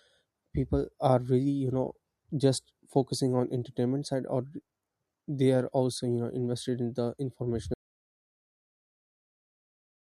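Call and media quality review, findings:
Audio dropout to silence from 7.74 s to end of clip (about 2.3 s). Speech cuts off abruptly right after "invested in the"; the remainder is silence, with no room tone or noise floor. Likely cause: input lost mid-flow (device disconnect, link failure or stray mute), with the encoder continuing to write silence. Speech after the cut is not recoverable.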